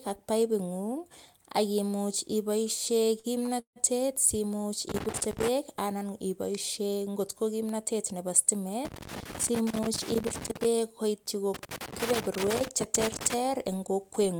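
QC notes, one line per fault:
3.19 to 3.26 s and 3.46 to 3.50 s, short stall from a late packet: right after "paipingung ak imuch iboisie" the sound gets held on itself twice, first for about 45 ms and then for about 16 ms, with a faint buzzy smear each time. A packet wasn't there when it was due, the jitter buffer ran dry, and the receiver kept stretching the last bit until the packet turned up. Then it picked up from the same spot, so nothing's lost, it just runs that little bit late.
3.60 to 3.78 s, call audio freeze: a longer hold right after those two. The last sound carries on as a buzz for a moment, then drops to silence for about 110 ms, and the audio comes back exactly where it stopped. In all, about 163 ms of padding gets dropped into the clip and none of the speech goes missing. That's likely packets being held up somewhere along the route, with the jitter buffer emptying while it waits.
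4.89 to 5.48 s, 8.85 to 10.65 s and 11.54 to 13.34 s, loose connector crackle: three bursts of irregular scratchy crackle, the first one ending just before "anan iboisie ngot ko" and the other two running nearly 2 s each. What you're hearing is a worn or dirty contact that keeps making and breaking as it shifts, chopping the signal into rough fragments, and with any DC on the line, every break throws in a pop on top.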